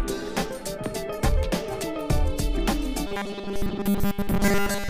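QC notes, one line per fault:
3.07–4.89 s, robotic sound from repeated short buffers: the sound turns into a rigid metallic buzz locked at 200 Hz, likely because a 5 ms slice keeps being replayed while most of the real audio is skipped. Unlike flanging, this pitch never sweeps.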